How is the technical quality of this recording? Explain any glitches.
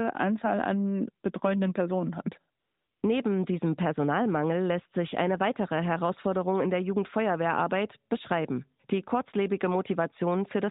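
One glitch stands out in this speech clip, heard through a narrowband mobile path that cuts everything above 4 kHz, with light codec colouring that fits AMR-NB near its top 12.2 kbps mode.

AMR comfort noise, 2.60 to 3.02 s: for about 420 ms the sender sent no speech frames, and the receiver filled the gap with smooth synthetic hiss in place of the real background.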